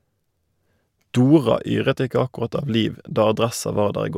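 Nothing in the recording stood out as a technical problem on listening.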